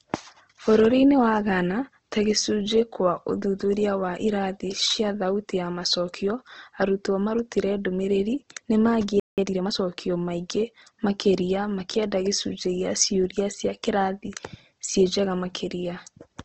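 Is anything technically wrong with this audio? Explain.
Yes, there are three faults. Throughout, the speech has a grainy, rough texture and nothing above about 8 kHz. This is likely Opus compression in its music (CELT) mode at a rate that fits roughly 16 kbps. The encoder keeps every band's energy but fills starved bands with folded or noisy content. Unlike MP3, it roughens the sound rather than swirling.

At 9.20 s a playback stall cuts the audio to silence for 0.18 s, until 9.38 s. The player likely ran short of data and went quiet before continuing. It is a gap in mid-flow, not a dropout smeared by concealment.

From 9.38 to 9.74 s comes time-compressed catch-up. The player trims its backlog by cutting and cross-fading small pieces, so the sound runs 1.5 times faster at unchanged pitch. Because the pitch stays steady, this is not a simple speed-up.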